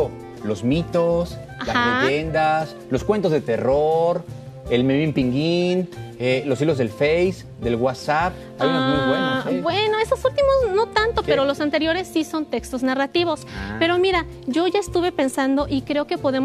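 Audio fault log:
5.20 s, compressed frames skipped. About one codec frame, roughly 20 ms, is lost. The sound jumps ahead, leaving a blip or click at the join.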